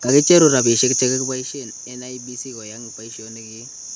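Nothing stood out as a technical fault on listening; the band-limited call-microphone sound, the background noise of the room and the change in level around 1 s as the talker moves are all normal.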